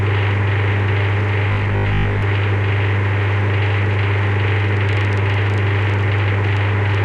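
From 1.49 to 2.23 s the sound takes on a rigid, metallic buzz pitched at 50 Hz: robotic sound from repeated short buffers. The likely cause is audio arriving too seldom, so playback fills the gaps by looping the most recent 20 ms chunk. About half of this stretch is repeated material rather than new audio, and the loop's fixed period imposes the 50 Hz tone, while the underlying sound's contour still comes through roughly.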